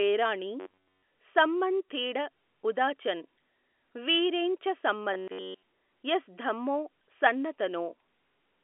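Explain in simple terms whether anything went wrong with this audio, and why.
Yes. From 0.60 to 1.03 s and again from 5.14 to 5.63 s, the speech turns into a stiff, metallic buzz around 94 Hz. This is robotic sound from repeated short buffers, likely caused by audio arriving too late, so roughly 11 ms snippets were looped instead.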